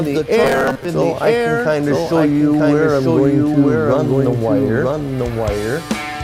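Robotic sound from repeated short buffers, 0.44 to 0.85 s: a rigid metallic buzz at 133 Hz, likely from a 7.5 ms buffer replayed while roughly two fifths of the audio is skipped. A doubled audio track runs throughout, with a second full-band copy about a second behind at roughly equal level, likely from a slower parallel capture path.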